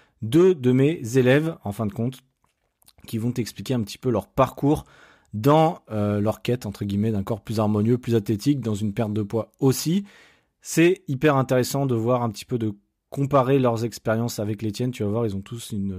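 Crude rate conversion, 5.57 to 10.65 s, before "hyper intéressant de voir": unfiltered nearest-sample picking, 48 to 44.1 kHz, adds a gritty, inharmonic fizz tracking the speech.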